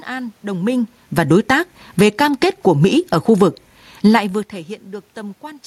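Automatic gain falling runs from 0.45 to 4.22 s. The gain control judged the input too loud and pulled its gain down gradually, by about 7 dB, so the speech and the room noise behind it sink together rather than the talker simply moving away.

Automatic gain rising overlaps it, from 1.42 to 5.62 s. Here the control judged the level too quiet and slowly brought the gain back up by about 4 dB, making voice and background swell together over several seconds, separate from the talker's movements near the microphone.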